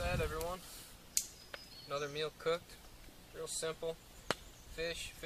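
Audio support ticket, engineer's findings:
Periodic USB or driver dropouts, 3.25–4.97 s: regular ticks every 0.246 s. A background task is stalling the bus or driver, so a few ms of audio get skipped each time.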